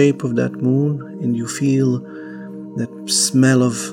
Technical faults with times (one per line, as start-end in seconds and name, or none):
none